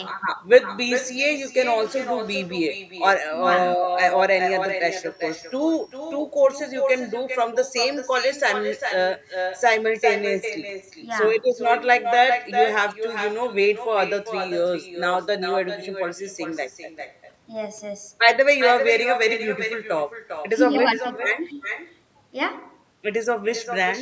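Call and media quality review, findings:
Echo with no canceller, throughout the speech: every phrase shadowed by a thinner copy about 6 dB down, arriving roughly 0.4 s late. The far end's loudspeaker feeds its microphone, and no echo canceller removes it. Spectrogram shows each syllable ghosted, offset right. Band-limited to 8 kHz by normal call mic processing.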